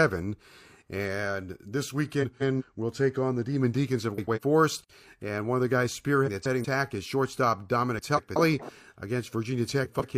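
Speech with a frames out of order fault: at five points, two neighbouring runs of coded frames were decoded in swapped order, so each stretch plays with its halves exchanged and no time is lost. This garbles the sound into a brief flutter, at 2.22–2.62 s before "we'll take on the", 4.18–4.39 s, 6.26–6.65 s between "one of the guys" and "is shortstop", 7.98–8.37 s after "is shortstop", and 9.84–10.18 s.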